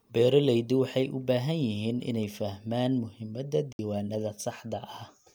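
From 3.73 to 3.79 s, a digital broadcast dropout: the receiver muted over what sounds like two lost frames, cutting the speech to silence.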